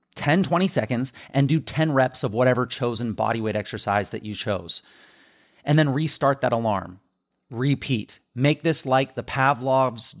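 A speech recording with no technical faults to report. Nothing in it calls for a time or a cause.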